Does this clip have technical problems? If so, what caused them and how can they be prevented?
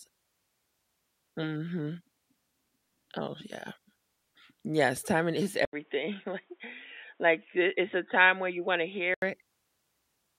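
Yes. At 5.65 s, just after "timing is", the sound drops out for 80 ms. It then returns dull and boxy, with nothing above 3.8 kHz. A faint new background noise appears, about 40 dB below the speech. The level stays roughly the same. At 9.22 s the full band returns. This is likely an input switched to a poorer device, such as a headset's call profile. To prevent it, lock the recording input so the system cannot change devices mid-session.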